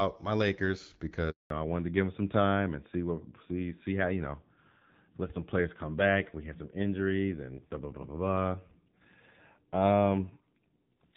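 At 1.30 s the speech cuts out in a handover gap. The call was switched between networks, and no speech frames arrived during the move. The sound fades within a few tens of milliseconds. It stays silent for about 200 ms, until 1.50 s.

From 1.50 s to the end, a fallback to narrowband follows. Before the gap, the speech has the light colouring of the HD Voice wideband codec, which fits about 12.65 kbit/s AMR-WB. Afterwards nothing remains above 4 kHz. The speech sounds duller and rougher, which points to AMR-NB at about 7.4 kbit/s.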